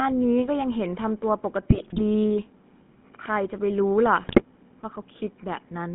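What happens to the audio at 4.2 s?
GSM bit errors strike from 4.22 to 4.43 s. Flipped bits corrupt the decoder's filter, pitch and gain values, so the sound breaks into gargling squawks and pops. On a spectrogram the formant bands smear and jump, with level spikes on the waveform, consistent with roughly ten damaged frames.

Underneath, the GSM full-rate codec's buzzy, gravelly roughness persists, with the spectrogram empty above about 3.5 kHz and below about 150 Hz.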